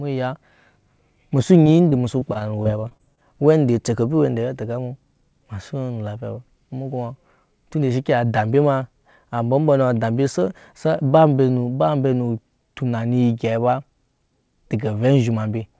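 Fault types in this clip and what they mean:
Repeated packet loss (robotic sound): between 1.64 and 3.19 s the speech keeps breaking up, with eleven short holes, none longer than about 22 ms. Each is patched by stretching the sound just before it, so roughly 13 percent of that stretch is filler, and it comes across as choppy. A waveform shows repeated, copied-looking cycles and uneven envelope steps. A spectrogram shows smeared horizontal streaks and brief breaks, all below the call codec's 8 kHz ceiling.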